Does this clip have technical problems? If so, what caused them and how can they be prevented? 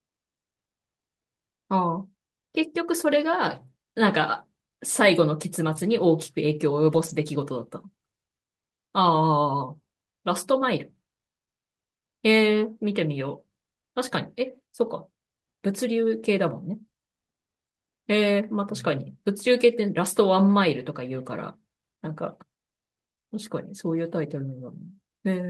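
Yes. Lost packets were rebuilt from error correction at 1.95 to 1.97 s and across 6.93 to 7.23 s. Low-bitrate copies from the following packets filled about 20 ms and about 160 ms. The waveform shows no gap, but the spectrogram shows rougher, noisier patches there. Prevention: reduce network packet loss, for example with a wired connection or less congestion, so the decoder rarely needs the backup copies.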